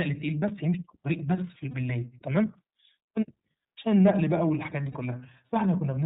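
From start to finish the speech carries the plainly audible signature of the iLBC codec. Everything above 4 kHz is gone, giving a narrowband telephone quality, and the voice has a slightly rough, synthetic grain. That graininess points to iLBC's 30 ms frame mode at around 13.33 kbps. Unlike simple band-limiting, the roughness comes from each frame's excitation being coded on its own. This produces a coarseness, not merely dullness.

At 0.48 s there is a block of digital silence, a hole only about 2 ms long where the sound cuts out and returns with no fade. At this length it comes across as a tick or dip, not an audible gap. Its abrupt, hard-edged cut sets it apart from a codec dropout, which would be filled with sound instead of cut to nothing.

At 1.71 s and again at 4.92 s, lost iLBC frames leave about 30 ms of sound missing each time. The decoder covers each hole by repeating the last pitch cycle mixed with noise. 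The result is a brief held, slightly buzzy smear instead of silence. The voice recovers almost immediately afterward because each iLBC frame decodes independently of the one before.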